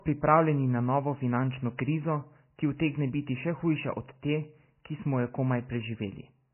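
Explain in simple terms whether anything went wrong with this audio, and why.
Likely low-bitrate audio saved at a high bitrate: heavily squeezed speech was re-saved larger, which can't restore detail. Throughout, nothing above 3 kHz remains, so it sounds muffled.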